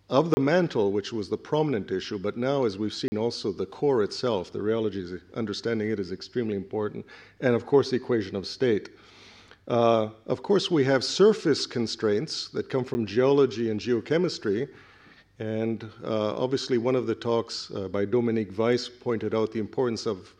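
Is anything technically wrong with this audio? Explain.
Yes: blocks of digital silence at 0.34–0.37 s (30 ms), 3.08–3.12 s (40 ms) and 12.94 s (10 ms), where samples were zeroed, cutting abruptly out and back, and the longer gaps sound like short holes.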